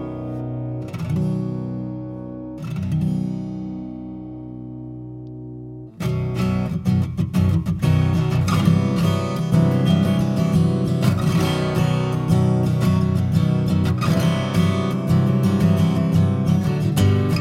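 No technical faults can be heard anywhere in this audio. There is nothing to flag at any point in the recording.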